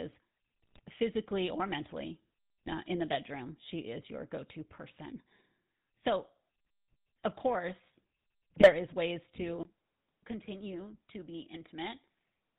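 Throughout, the speech carries the buzzy, gravelly roughness of the GSM full-rate codec, consistent with its 13 kbps stream, with nothing above 4 kHz. This is a steady texture rather than isolated events. GSM bit errors then break through from 0.62 to 0.80 s, from 2.66 to 2.74 s and from 8.54 to 8.75 s. Corrupted filter, pitch or gain values produce sudden squawks, pops and gargling, which separates them from the even codec buzz. At 9.63 s a 20 ms silence marks what is likely an input switched to a poorer device. From there to the end the sound is about 5 dB quieter and boxier, with a new noise floor roughly 45 dB down, a lasting change of character rather than a momentary fault.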